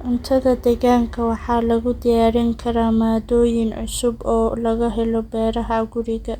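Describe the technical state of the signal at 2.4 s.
At 2.4 s the speech signal is intact, with no audible dropout, distortion, noise burst or other fault at that point.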